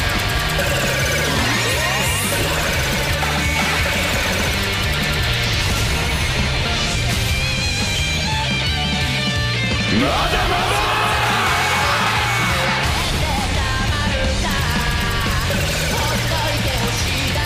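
No technical faults can be heard anywhere in the audio.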